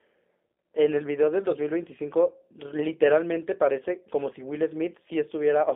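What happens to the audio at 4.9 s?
At 4.9 s, as throughout the clip, the speech carries G.729 codec damage. The sound points to 8 kbit/s coding. Each 10 ms frame is resynthesised from a vocal tract filter, a pitch predictor and a sparse set of pulses, which gives the voice a plainly audible rough, buzzy, synthetic edge. The audible band runs only from about 250 Hz to 3.6 kHz, so the low body and all the upper sibilance are missing.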